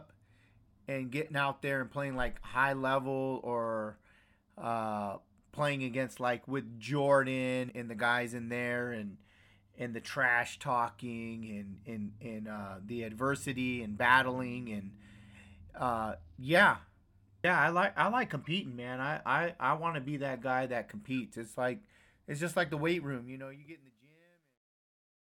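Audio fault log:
17.44 s, audio missing between chunks: the speech jumps abruptly just before "I like I like", with roughly a third of a second gone and the two sides butted together with no gap, so the words run on unnaturally. This is likely the recorder or processor handling the audio in chunks, here about 10 s long, and dropping a short piece while it closed one chunk and opened the next.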